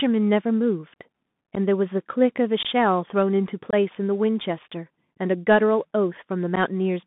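From the start the speech sounds thin and boxed-in, with a fine granular hiss beneath it, scratchy s sounds, and a grainy edge on louder passages. Nothing reaches below about 150 Hz or above about 3.6 kHz. This is the Bluetooth CVSD headset codec, which fits a 64 kbps CVSD link. Each sample becomes a single up-or-down bit with an adapting step size, so fast, loud high content outruns the step and turns gritty.

Four abrupt dropouts interrupt the speech, at 1.55 to 1.58 s, 2.63 to 2.66 s, 3.71 to 3.74 s, and 6.56 to 6.58 s. Each is a short hole with hard edges, and the sound resumes weaker for a moment. The lost stretches are about 11 ms, 19 ms, 23 ms and 11 ms. These are unconcealed Bluetooth headset packet loss: a few voice packets between headset and phone went missing, and silence or an idle pattern filled the gap.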